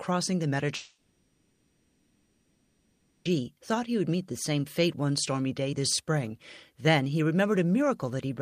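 From 0.75 s to 3.27 s, about 2.5 s of the speech is replaced by concealment sound: the last sound before the gap is stretched into a buzzy, hissy continuation that fades to a low steady noise, never to true silence. The speech then resumes with that stretch simply missing. This is likely a long network dropout. Unlike a brief packet-loss glitch, the gap lasts seconds, and the filler decays instead of the speech picking up moments later.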